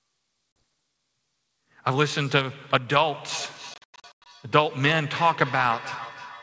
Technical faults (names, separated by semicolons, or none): packet loss on an ADPCM call; feedback echo between two devices